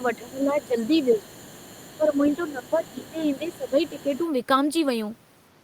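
From the start until 4.26 s, the other side's voice leaks through: a second, fainter talker sits about 25 dB below the main speech. The likely cause is a loudspeaker on the talker's device feeding the microphone, with the echo canceller leaving a residue behind. Unlike ordinary background chatter, this voice is the far end of the call coming back, and it ends at 4.26 s.

Over the same stretch the main speech is suppressed in double talk, first from 0.18 to 1.31 s and again from 1.97 to 4.12 s. The talker's level sags by up to roughly 15 dB, in pieces adding up to most of a second in the first span and about two seconds in the second. The likely cause is the echo canceller, confused by both sides talking at once, turning everything down. What separates this from a network dropout is that the dips follow the overlap with the leaked voice instead of landing at random.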